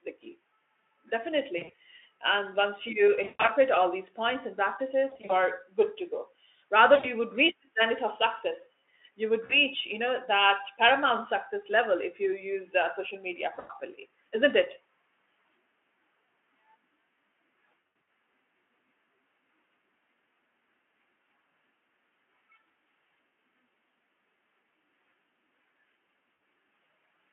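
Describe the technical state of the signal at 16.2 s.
At 16.2 s the audio is intact, with the speech carried through the Speex codec and its 300 to 3400 Hz line band without any fault at that moment.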